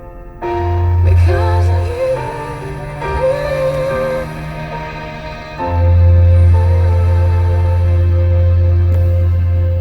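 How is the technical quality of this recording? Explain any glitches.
Quality falls partway through. An adaptive stream at a lower bitrate plays from 5.80 s to the end. A slowed connection forced a lighter encode, which fits a step from about 64 to 32 kbit/s Opus. The sound turns abruptly grainier with more codec artefacts, and there is no gap.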